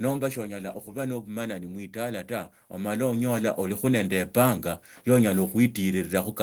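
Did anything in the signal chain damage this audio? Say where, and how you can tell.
Yes. From 0.05 to 0.95 s there is automatic gain falling in the call processing stage. The speech starts hot, then level and background noise sink together by about 5 dB, the signature of an AGC pulling its gain down after judging the input too loud.

From 1.25 to 4.38 s there is automatic gain rising, again in call processing. Speech and room noise swell together by about 11 dB over roughly three seconds, showing the AGC slowly raising gain after deciding the input had become too quiet.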